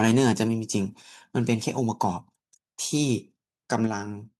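From 0.0 to 0.44 s the loudest speech peaks are flattened, about 5 dB past the converter's limit, with shorter bursts about 2 dB over at 1.48–1.54 s and 3.72–3.76 s. This is microphone overload, likely from input gain set too high, so a small share of samples clips. It sounds like a harsh crackle riding only the peaks. At 1.02 s and again at 3.87 s, the microphone volume is stepped down by about 4 dB, likely by call software reacting to that clipping. Unlike the overload, this step is clean, with no added distortion: voice and background fall together in one sudden drop and stay at the lower level.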